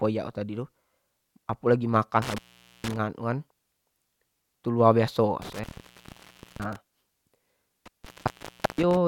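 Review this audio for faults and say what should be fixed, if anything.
A loose cable or plug connection is breaking the signal path, an intermittent contact fault that happens three times. Each time the line opens, the speech drops out with crackle at the edges and faint hiss in the gap: at 2.22 to 2.96 s (open about 0.46 s), at 5.42 to 6.76 s right after "tu laur baiso" (about 0.96 s), and at 7.86 to 8.97 s (about 0.73 s). Reseat or replace the suspect cable and connectors, and strain-relieve them so they can't shift during recording.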